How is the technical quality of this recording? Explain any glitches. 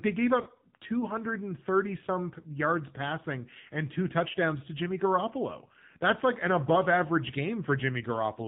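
The recording has audible technical damage: narrowband mobile coding throughout and one brief dropout early on.

AMR narrowband mobile codec, throughout: the speech was squeezed through AMR-NB, which fits a 7.4 kbps mode, so nothing above 4 kHz survives and the voice sounds muffled, buzzy and plainly synthetic.

Lost AMR speech frames, 0.42 to 0.48 s, just after "they gave": the decoder reused the previous pitch and vocal-tract settings at falling gain, which fits about 40 ms of missing frames, leaving a brief dip or warble before the speech recovers.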